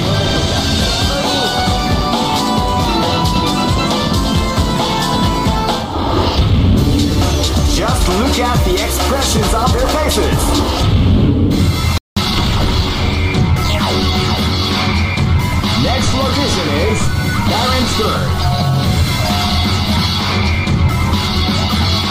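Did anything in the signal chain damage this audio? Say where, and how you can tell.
Yes. At 11.98 s the sound drops to silence for 188 ms, resuming at 12.17 s. This is a playback stall at the playback stage, likely caused by the player's buffer running dry or its output thread being blocked until data flowed again.

From 12.17 s to 12.91 s the audio runs hurried, at 1.25 times normal speed, with pitch unchanged. This is time-compressed catch-up: the player works off its backlog by cutting short segments and cross-fading across the joins.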